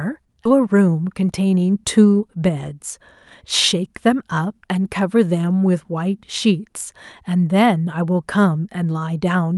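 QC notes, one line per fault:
0.45 s, skip ahead: the audio jumps forward with no gap, roughly a second of material missing, as a stretch of audio was dropped while later audio was already waiting.
0.49 to 2.99 s and 3.76 to 4.85 s, jitter buffer speed-up: the speech sounds hurried at unchanged pitch, about 10% then 7% faster, as the buffer trimmed pitch-period slices to shed excess delay.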